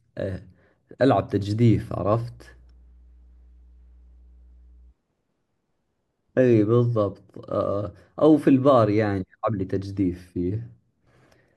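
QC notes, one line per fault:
2.07 to 4.94 s, mains hum: a steady 60 Hz tone with a few low harmonics sits well beneath the speech for this stretch, then stops. The power line is leaking into the signal, most plausibly through a ground loop or a nearby transformer.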